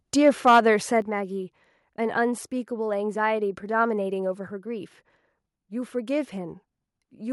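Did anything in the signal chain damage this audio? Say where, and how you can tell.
Yes. At the converter, the microphone overload from 0.26 to 0.68 s was likely caused by input gain set too high. Peaks drive about 5 dB past full scale, and around one sample in twenty is flattened, giving the loudest speech a harsh, crackling edge.

In call processing, the microphone volume stepped down at 1.02 s, likely an automatic gain correction reacting to that overload. Speech and background together fall by about 6 dB in one abrupt step rather than a smooth fade, shortly after the distorted passage.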